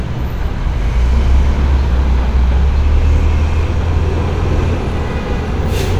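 Nothing here calls for attention; it's a short recording of everyday sounds, and no technical faults come through anywhere in it.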